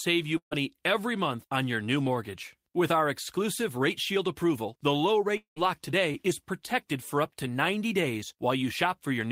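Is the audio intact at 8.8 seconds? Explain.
Yes, the audio is intact at 8.8 seconds, with no fault present at that moment.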